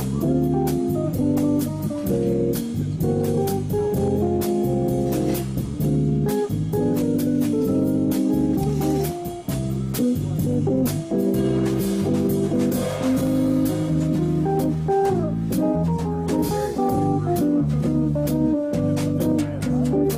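A blemish on the disc surface wiped out more data than the player's error correction could reconstruct, and because the damaged spot returns once per revolution, the failure repeated. Between 13.02 and 13.52 s this produces CD scratch ticks: three short clicks, each well under a millisecond, spaced roughly a quarter of a second apart. They are the brief points where the player concealed or muted the unrecoverable samples.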